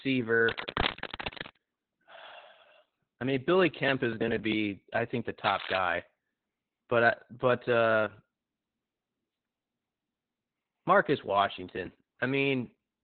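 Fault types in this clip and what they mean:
Opus voice compression: The speech sounds muffled, hoarse and faintly robotic throughout, with nothing above 4.3 kHz. This points to Opus running its SILK speech coder at a very low bitrate, around 8 kbps. At that rate it narrows the band and codes the excitation only coarsely.
Cable scratch noise: Dense, uneven rustling and scratching rides over the speech, nearly as loud as it, from 0.47 to 1.59 s and again from 5.44 to 5.80 s. The likely cause is a worn cable or connector being moved, so that its contact resistance jumps rapidly.
Processor overload crackle: A gritty burst of crackle tears through the sound from 3.72 to 4.53 s and again from 11.75 to 12.10 s. The processor misses a run of deadlines in a row, and each missed buffer of a few milliseconds is skipped, leaving a hard-edged gap.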